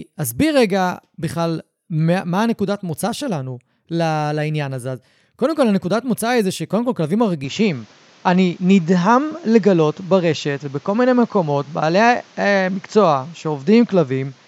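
A speech recording whose character changes abruptly at 7.44 s and stays changed to the end: from there the sound is duller, with nothing above 7.6 kHz, a fresh background hiss sitting roughly 35 dB below the speech, and a level shift of around 5 dB, all without any gap at the join. This most likely comes from an input switched to a poorer device mid-recording. On a spectrogram the upper band is cut off flat at 7.6 kHz from 7.44 s onward, with a new noise floor filling the pauses, while the waveform's envelope steps in height at that moment.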